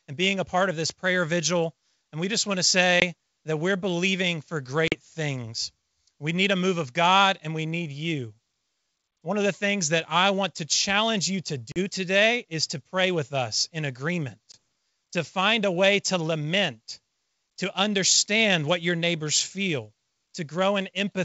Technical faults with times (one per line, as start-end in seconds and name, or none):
3.00-3.03 packet loss on an ADPCM call
4.88-4.95 packet loss on an ADPCM call
11.72-11.79 packet loss on an ADPCM call
14.52-14.55 packet loss on an ADPCM call